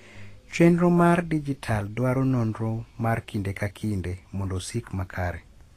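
Throughout the speech, the audio has most likely passed through low-quality Vorbis compression, where the encoder spends too few bits on the upper spectrum and swaps fine treble detail for coarsely quantised noise of similar energy. Nothing sits above 14.2 kHz, and the damage is plainly audible: sibilants and breathy sounds turn hissy and grainy, tones take on a rough edge, and consonant attacks blur. The extent of the damage points to a bitrate in the region of 34 kbps.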